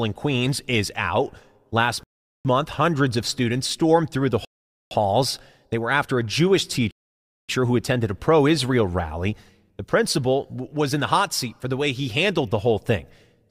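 Speech with three rebuffering stalls. The playback runs dry and goes silent, then picks up exactly where it left off. No speech is lost. Time is added instead. The first stall runs from 2.03 to 2.45 s, about 0.42 s, just before "month hundreds of students". The second runs from 4.45 to 4.91 s, about 0.46 s, right after "students stormed through the". The third runs from 6.91 to 7.49 s, about 0.58 s, just before "who attended a pro".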